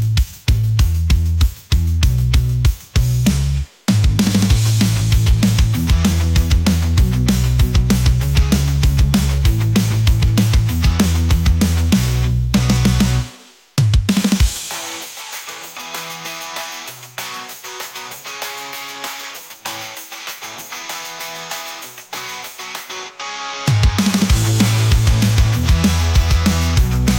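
No technical faults are audible.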